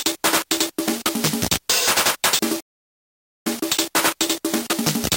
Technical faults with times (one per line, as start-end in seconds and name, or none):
2.60-3.47 playback stall
3.47-5.16 time-compressed catch-up